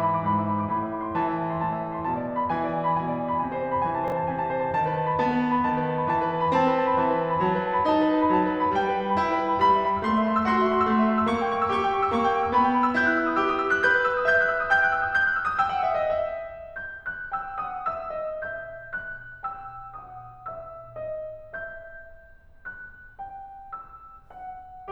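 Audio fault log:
4.08–4.12 s chunks out of order: a 20 ms block of the music was delivered or written one block late, so it plays after the block that should have followed it. No audio is lost; the two short pieces are swapped. The swap leaves three hard joins where the waveform jumps between unrelated points, heard as a brief jumbled stutter in the music.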